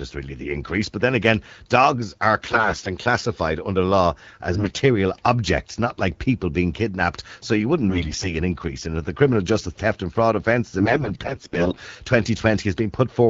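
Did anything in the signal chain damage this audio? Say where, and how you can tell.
Yes. The speech turns hoarse, scratchy and gargly while keeping its pitch and level, at 2.43–2.89 s, 4.53–4.81 s and 7.88–8.35 s, and most heavily at 10.80–11.81 s. These are AMR bit errors on the network link. Flipped, weakly protected bits misplace the excitation pulses and skew the pitch, gain and spectral values.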